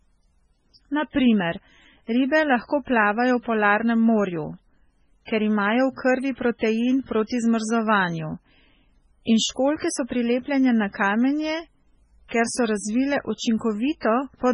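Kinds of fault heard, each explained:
MP3 compression: a likely bit-starved MP3 encoder, fitting roughly 16 kbps, cuts everything above 10.4 kHz and flickers weak detail, leaving the speech heavily watery and swirly.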